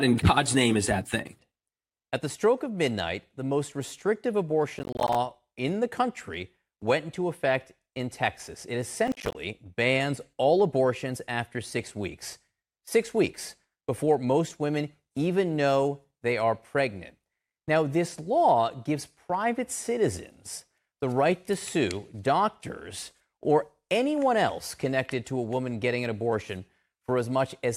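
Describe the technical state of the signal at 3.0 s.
At 3.0 s the speech signal is intact, with no audible technical fault at that moment.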